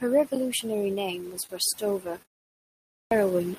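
It's a speech clip with two short stalls from late packets, around 1.47 to 1.51 s and 2.22 to 2.27 s. Each time the jitter buffer ran dry, so the last bit of sound gets held for about 25 ms until the packet shows up, then carries on with nothing skipped. There's also a clipped start after a pause at 2.6 s. After a 0.42 s gap the output device dozed off and took about half a second to come back, so roughly 0.51 s of the next phrase is swallowed and it kicks in abruptly, missing its opening sounds.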